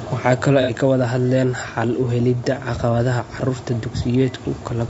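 From start to finish the speech sounds rough and grainy, with a hiss sitting between the harmonics and an upper band that sounds thin and somewhat synthetic. The damage is plainly audible. The likely cause is low-delay AAC compression of the AAC-ELD kind used for video calls, at a bitrate that points to around 32 kbps. Its short frames capture pitch harmonics coarsely and spend bits quickly, so too little is left for a clean spectrum.

From 0.62 to 0.70 s there is a brief smeared, noisy patch where the sound loses its definition and turns phasey before recovering. This is AAC frame loss with concealment. Roughly 60 ms of coded audio went missing, which fits two lost frames. The decoder covered the gap by reusing the last good spectrum with randomised phase and estimated energy, which produces that washed-out texture rather than silence.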